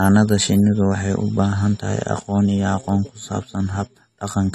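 From start to finish the speech carries plainly audible AAC compression damage: nothing sits above 14 kHz, and sibilants sound fizzy and smeared, likely from AAC-LC coding at a rate that fits 32 kbps. Unlike a clean low-pass filter, coarse quantisation also leaves a warbling texture.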